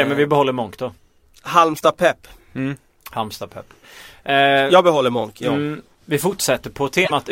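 Around 1.74 to 1.81 s, and again from 7.02 to 7.11 s, there's damaged data in the compressed stream: corrupted bytes throw the decoder off its frames until it resyncs, so each spot comes out as a chirp, squawk, click or short hole breaking into the speech.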